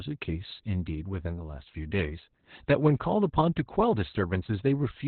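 Opus voice compression affects the whole clip. The speech sits in a narrow band with nothing above about 4.2 kHz, which points to narrowband SILK coding at a bitrate around 8 kbps. At that rate the linear-prediction coder keeps only a coarse outline of the excitation, so the speech comes out muffled, hoarse and slightly robotic. The damage is heavy and stays constant from start to finish.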